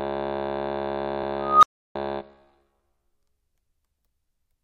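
At 1.22 s the music stutters: a block of repeated frames, about 46 ms long, which fits two compressed frames, gets played a second time, so you hear that slice twice. It happens again at 3.22 s, same length, and each repeat pads the track by that 46 ms.

From 1.39 s there's an unstable filter: a recursive filter blows up, so a tone around 1.5 kHz swells over roughly 0.24 s into a loud, clipped squeal. The output then overflows and drops to silence for about 0.33 s until the filter resets, ending at 1.95 s.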